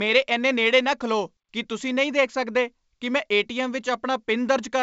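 No faults can be heard anywhere in this speech clip.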